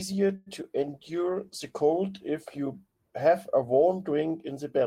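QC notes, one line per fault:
0.35–0.48 s, call audio freeze: packets were likely held up in transit and the jitter buffer ran dry, so the receiver stretched the last sound into a fading buzz or hiss for about 110 ms. Nothing is lost, but the speech after it arrives 110 ms late.
0.62–0.73 s, short concealed packet loss: about 20 ms of the call missed the decoder, and the receiver patched the hole by extending the preceding sound before blending back. The result is a brief smear or wobble, adding roughly 10 ms.
0.81–2.64 s, call bitrate drop: the bandwidth estimate fell and the Opus encoder went from 32 kbps to 16 kbps, holding the lowest rate for about 1.01 s. Coarser coding makes the speech sound rougher until the rate recovers.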